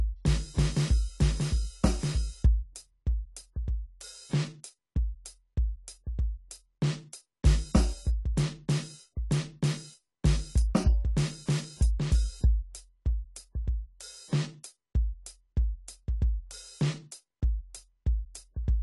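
Throughout, AAC compression at likely a low bitrate, around 32 kbps, removes everything above 11.5 kHz, leaving the music dull, smeared and audibly warbly.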